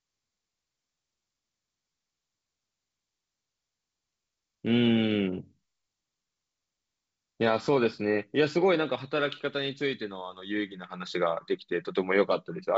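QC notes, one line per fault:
No faults to note.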